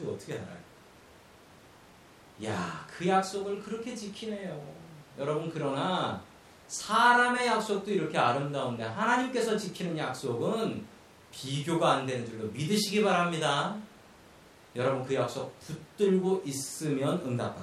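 No technical faults are audible anywhere in the speech.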